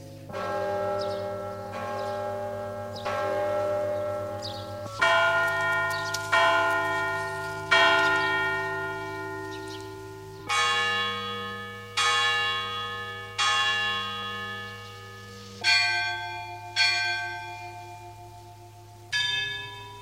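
Compressed frames are skipped twice, at 3.05 s and 10.39 s. Each time the audio lurches forward by roughly 50 ms, which fits about two lost 26.1 ms frames. Because adjacent frames overlap, each join is a short smeared blip rather than a hard click.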